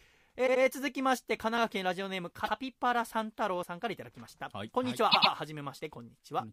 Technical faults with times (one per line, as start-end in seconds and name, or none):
0.46-0.62 repeated frames
2.44-2.52 repeated frames
5.11-5.32 repeated frames